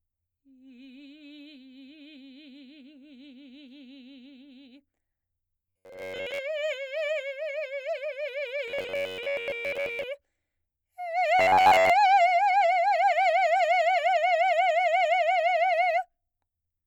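From 5.66 to 6.38 s, 8.68 to 10.03 s and 11.40 to 11.90 s, the music goes robotic: a rigid metallic buzz near 94 Hz, likely from repeated short buffers, with roughly 10.7 ms chunks looping over most of the audio.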